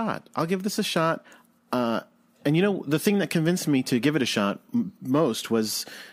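No technical faults can be heard anywhere in the speech.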